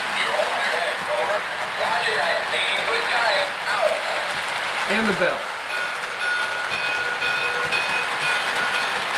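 No technical faults can be heard anywhere in the audio. Nothing in it calls for a timestamp or a fix.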